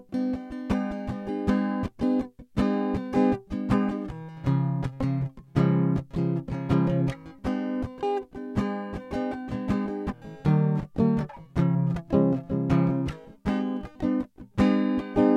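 Wrong sample rate, from start to finish: the music runs about 1.09 times too fast and sits roughly 1.47 semitones sharp, which fits 44.1 kHz material being played back at 48 kHz with no conversion between the two rates. Because speed and pitch are tied to the same clock, both shift by the same ratio, so tempo is hurried and everything is pushed upward in pitch, with instruments sounding slightly brighter and thinner than they should.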